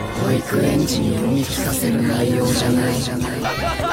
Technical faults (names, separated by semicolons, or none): doubled audio track